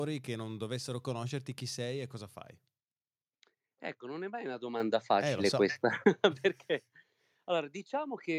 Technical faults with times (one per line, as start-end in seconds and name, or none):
4.80 microphone volume stepped up